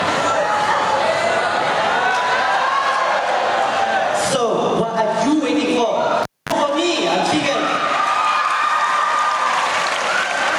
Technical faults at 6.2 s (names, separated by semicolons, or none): gain pumping; cable pulled and plugged in